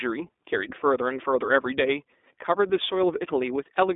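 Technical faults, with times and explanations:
throughout iLBC codec: the speech sits in a narrow 250 Hz to 3.6 kHz band with nothing above 3.8 kHz, and carries a plainly audible rough, synthetic grain from excitation coded independently in 20 ms frames, which fits a 15.2 kbps mode. That grain distinguishes it from plain telephone band-limiting.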